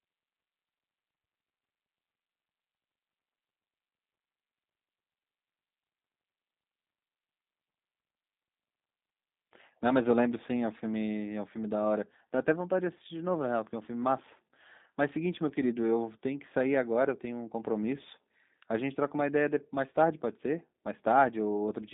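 Throughout, the speech carries G.729 codec damage: band-limited to 200 Hz–3.7 kHz, with a rough, synthetic buzz from pulse-coded excitation that fits an 8 kbit/s coder.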